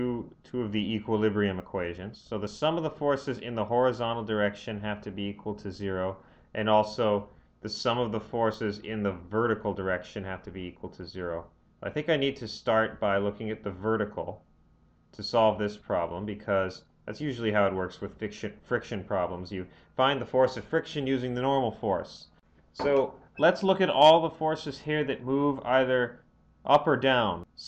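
Likely dropped buffers (overrun), with samples overwritten before being read, cause forward jumps at 1.6, 2.47 and 8.54 s, each skipping a few tens of milliseconds.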